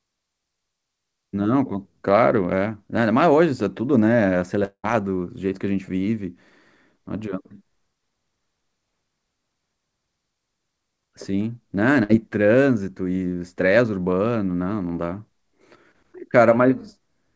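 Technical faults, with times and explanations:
4.64–4.85 s, long network dropout. The speech stops flowing here, most likely because no audio arrived from the network for a while. The receiver keeps the last sound going for about 190 ms, so it smears into a buzz or hiss that fades away. Near the end, about 70 ms of near silence is left. The speech then picks up further along. About 0.2 s of the original is gone and never played.
12.03–12.11 s, burst of packet loss. A short run of audio went missing or came too late to be played, about 60 ms in all. The receiver fills the gap by repeating the last sound and turning it down, so it comes out as a brief buzz or hiss that dies away. The speech then resumes a little further on, with that stretch skipped. Like the rest of the clip, it carries nothing above 8 kHz.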